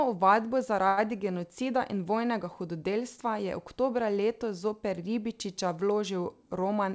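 At 0.88 s the speech hits a short stall from a late packet, lasting until 1.00 s. A packet missed its playout time and the jitter buffer ran dry, so the receiver extended the last sound for about 92 ms and then resumed exactly where it stopped, with nothing lost. The result is a held, slightly buzzy sound, and the whole remainder plays about 92 ms later than before.

From 6.55 s to 6.93 s a jitter buffer speed-up sets in. With more audio queued than its target, the receiver repeatedly cut out short stretches a pitch period or so long, removing about 50 ms in total. Playback runs at 113% speed with the pitch unchanged, so this closing section sounds hurried. The band limit at 8 kHz, heard throughout, fits the G.722 codec on the call path, running at what sounds like 64 kbps.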